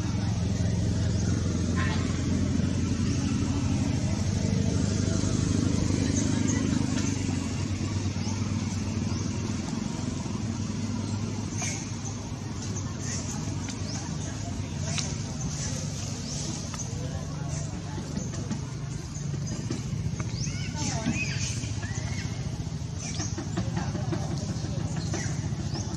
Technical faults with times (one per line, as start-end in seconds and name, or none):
15.53-15.60 loose connector crackle